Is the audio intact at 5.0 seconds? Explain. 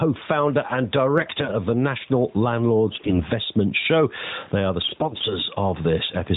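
No. From 4.84 to 5.34 s there are AMR bit errors. A weak link flipped the less protected bits in the frames, so the excitation pulses land in the wrong spots and the fine pitch, gain and spectral values drift. It keeps its rough pitch and level but goes hoarse and gargly.

There's also gain pumping running through the whole clip, including that moment. The gain swings by around 10 dB, which squashes the dynamics. That's likely a fast limiter reacting to gain set too high.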